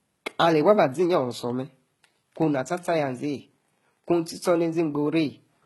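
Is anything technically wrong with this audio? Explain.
Yes. Throughout the clip, likely HE-AAC compression: the treble above the crossover is rebuilt from copied lower bands, so s sounds turn gritty and metallic; the heavy damage and the cutoff at 11.8 kHz fit roughly 16 kbps.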